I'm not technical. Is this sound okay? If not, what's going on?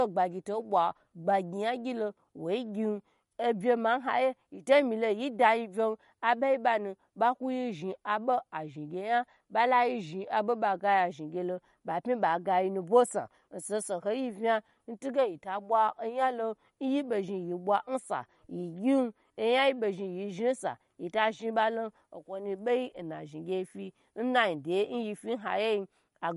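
No, it has a problem that runs the whole way through. The treble stops dead at about 11.2 kHz, so s and t sounds lose their crispness, and the speech takes on a watery, swirling quality with metallic chirps. This is plainly audible damage, most likely from MP3 compression squeezed too hard: the encoder drops the highest frequencies and lets weak details flicker in and out from moment to moment.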